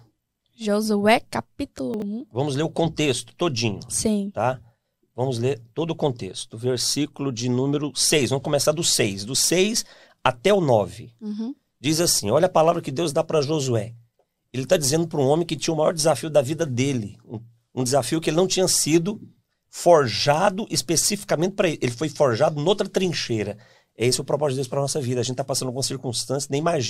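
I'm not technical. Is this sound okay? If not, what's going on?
No. Around 1.94 to 2.02 seconds there are chunks out of order: one 20-millisecond slice of the speech arrived three slices late and was played after the ones meant to follow it. Nothing is missing, but that moment sounds briefly jumbled.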